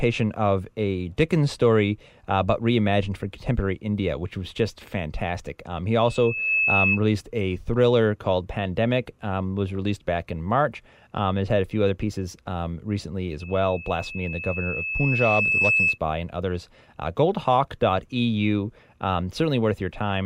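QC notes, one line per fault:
6.05–7.00 s, loudspeaker feedback squeal: a 2.6 kHz tone swells over about half a second to roughly 5 dB above the speech. The microphone is re-amplifying its own loudspeaker output, and loop gain exceeds unity at that frequency. It clears just before "released a thriller called".
13.40–15.98 s, loudspeaker feedback squeal: the same 2.6 kHz tone returns after "other pieces um recently", building more slowly, over about two seconds, to roughly 5 dB above the speech. The same acoustic loop is running away again. It stops before "and others".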